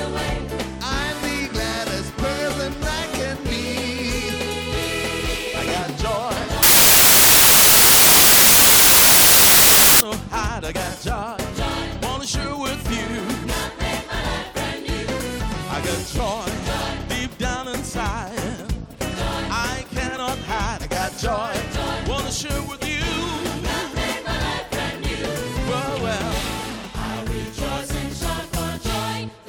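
From 6.63 to 10.01 s the audio gives way to loud, harsh broadband noise from samples built from the wrong bytes: each value is assembled with its bytes misaligned or swapped, so rapidly changing low bits dominate.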